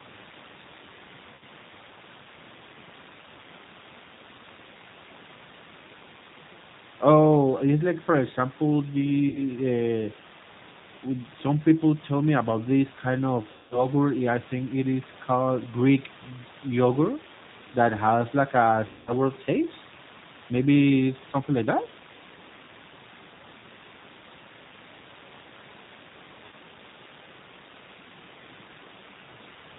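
Throughout the clip the speech runs through the G.729 codec at 8 kbit/s, and the damage is plainly audible. The decoder rebuilds each frame from a vocal-tract filter, a pitch predictor and a few sparse pulses, so the voice sounds rough and faintly synthetic. Nothing above 4 kHz survives, which leaves it narrowband. The room noise, sitting about 23 dB below the speech, takes on a warble as the codec models it.

VoIP packet loss concealed by the speech codec then occurs five times. At 1.35 to 1.43 s about 60 ms of audio is missing. At 9.29 to 9.43 s, just after "it's like for example", the gap is also about 60 ms. A 60 ms gap fits three lost 20 ms packets. At 13.51 to 13.86 s, between "about this kind of" and "I think it is", about 200 ms is lost. At 18.87 to 19.12 s, after "that has like a", another 200 ms is lost. At 26.46 to 26.55 s the gap is about 60 ms. In each case the decoder extends its last pitch and filter while lowering the gain, so the sound smears into a buzzy tone or coloured noise that fades. 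The 200 ms gaps fade furthest. Because each frame builds on the one before, the speech stays weak or distorted briefly after each gap.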